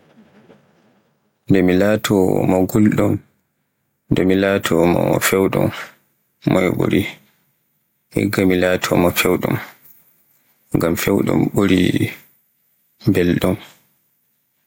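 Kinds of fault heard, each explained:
Gain pumping: The level swing is around 10 dB, and loud and quiet passages sit unnaturally close together, giving a squashed, flattened sound. The likely cause is input gain set far too high for the microphone, with a fast limiter or compressor clamping down on each loud peak.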